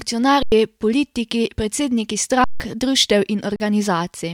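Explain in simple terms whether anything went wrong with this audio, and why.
Underrun with held sample at 0.43 s (before "politiki predsedniki", 0.09 s), 2.44 s (after "politiki predsedniki", 0.16 s) and 3.56 s (0.04 s). Playback ran out of audio, so the output froze at its last level. Sound stopped quietly and speech was skipped.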